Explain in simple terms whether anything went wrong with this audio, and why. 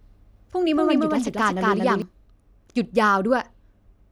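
A doubled audio track runs from the start to 2.02 s. The speech plays twice, with a copy about a fifth of a second behind at nearly equal loudness, until the copy cuts off abruptly. A slower second recording path likely captured it again.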